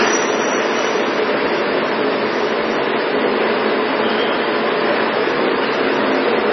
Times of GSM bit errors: none

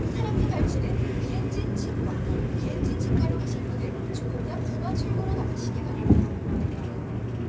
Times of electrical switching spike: none

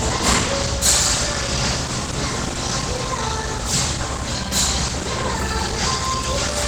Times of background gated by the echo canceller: none

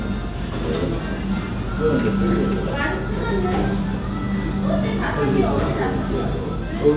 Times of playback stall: none

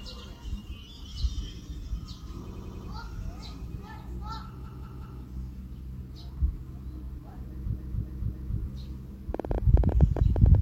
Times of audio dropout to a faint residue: none

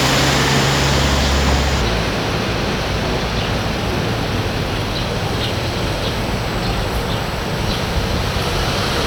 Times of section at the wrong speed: 1.81-9.06

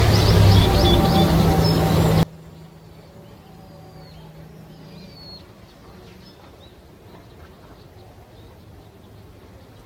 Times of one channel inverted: 2.23-9.85

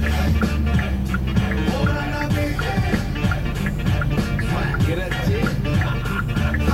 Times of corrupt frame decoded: none

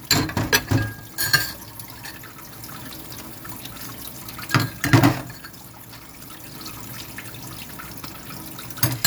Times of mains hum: none

